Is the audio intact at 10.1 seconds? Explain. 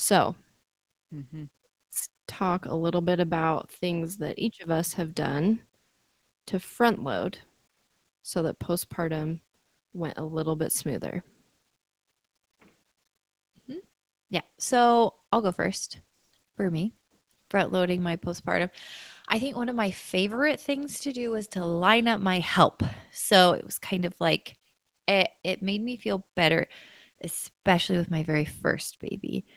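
Yes, the audio is intact at 10.1 seconds, with no dropout, click, distortion or other fault at that moment.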